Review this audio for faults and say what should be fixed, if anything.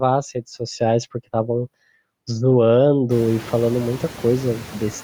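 Noise suppressor artifacts run through the whole clip. Steady background drops by about 17 dB between phrases and climbs back under the speech. Unlike a gate's clean on/off cut, the suppression works band by band. A gentler suppression depth, or a quieter room so less needs removing, would prevent it.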